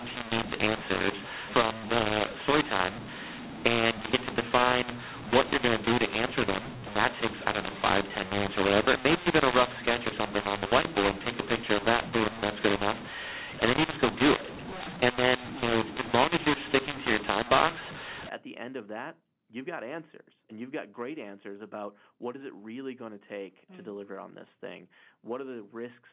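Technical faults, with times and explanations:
0.00–18.29 s, mu-law and A-law mixed up: the mu-law telephone signal is decoded as A-law until just before "at the end of", scrambling levels into harsh distortion. The waveform shows jagged, mis-scaled peaks over a raised noise floor, and the spectrogram shows pauses filled with noise up to 4 kHz.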